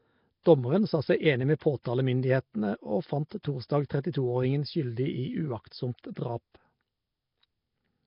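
Across the whole speech clip there is a rough, hissy halo and a smeared, underwater character, with nothing above 5.3 kHz. The heavy damage points to Nellymoser compression, likely Nellymoser Asao at a rate that fits about 22 kbps, starving weak bands and filling them with noise.

Pre-echo appears at 0.43 to 0.46 s, at 3.43 s just after "og fant", and at 6.14 to 6.17 s, spreading 19 to 27 ms ahead of sharp attacks. Block quantisation noise leaks into the quiet before each onset, heard as brief hiss and softened attacks.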